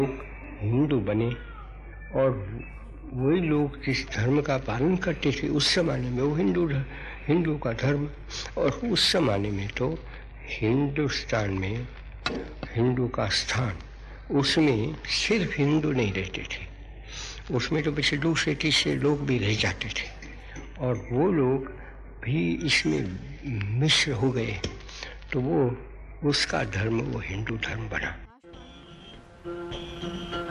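Nothing stood out on listening to this recording.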